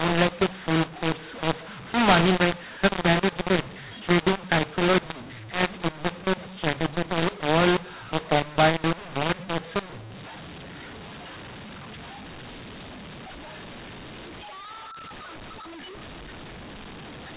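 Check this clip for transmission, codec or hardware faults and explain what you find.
The speech carries a companding-law mismatch for its whole length. It sounds harsh and gritty, with loud and soft passages oddly reshaped and pauses filled with hiss. This is mu-law and A-law mixed up: the 8 kHz G.711 stream was encoded as A-law but decoded as mu-law. Every 8-bit code lands on the wrong level, scrambling amplitudes and lifting near-silent samples well above zero.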